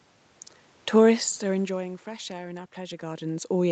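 Nothing in this recording stood out as a technical fault on listening.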